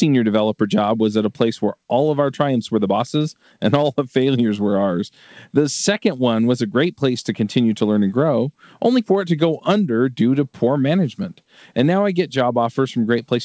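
No technical faults can be heard in this speech. It has passed through a working call path whose codec leaves nothing above 8 kHz, which fits wideband G.722.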